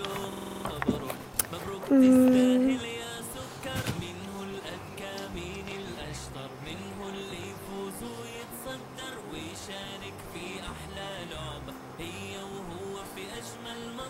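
From 0.33 to 0.65 s a system hang loop occurs: the driver stalled while the hardware kept replaying one 46 ms buffer, which fits a 2048-sample ring, seven times at 21.5 Hz. It sounds like a rapid machine-gun stutter, and unlike a dropout, no silence replaces the sound.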